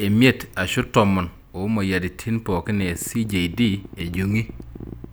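Just after "emiet ashu tomon omoyiaritin", at 2.67 s, a train of clicks begins. It runs until 5.05 s. The clicks arrive at about 13.5 per second, at an uneven pace. There are around thirty of them, all much the same shape. Their peaks reach roughly the level of the speech itself. They sound like a ragged ticking laid over the talking and the gaps alike. The likely cause is electrical interference or a faulty connection or power supply.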